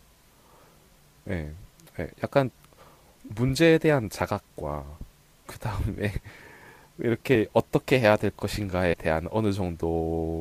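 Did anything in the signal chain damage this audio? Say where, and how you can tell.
Yes. Compressed frames were skipped, at the codec or storage stage. The speech jumps ahead at 3.29 s (about a tenth of a second), 7.35 s (a tiny jump) and 8.92 to 8.94 s (about 50 ms). Each jump points to whole frames dropped.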